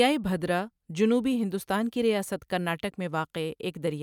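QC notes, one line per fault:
No faults were found in this speech recording.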